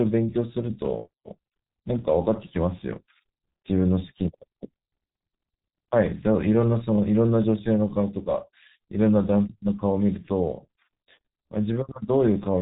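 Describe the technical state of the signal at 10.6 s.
At 10.6 s the speech carries the heavy damage of the G.723.1 codec, present from start to end rather than at this moment alone. The codec encodes speech in 30 ms frames and rebuilds it from a sparse, slowly updated voice model. Nothing survives above 3.8 kHz. The result is muffled and hoarse, with consonants smeared. The thin, rough quality fits a rate of about 6 kbit/s.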